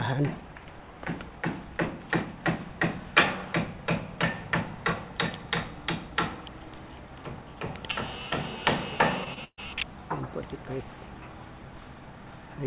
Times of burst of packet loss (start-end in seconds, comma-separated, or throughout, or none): 9.44-9.59